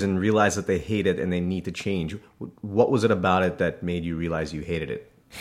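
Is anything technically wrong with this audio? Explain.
No, nothing in this speech recording stands out as a technical problem; the signal holds steady and intact throughout.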